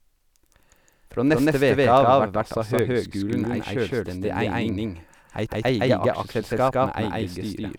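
From the start the speech is heard twice, a second copy about as loud as the first trailing by roughly 150 ms with no reverb tail. This doubled audio track is likely a second capture of the same signal through a slower path, mixed back in out of step.

From 0.35 s to 7.68 s, sharp ticks of uneven strength repeat about every 0.3 s, some thirty in all. These word clock ticks come from a digital link read by a receiver on its own unlocked clock. The two clocks drift apart by roughly 70 parts per million, and each time they slip a single sample is dropped or repeated.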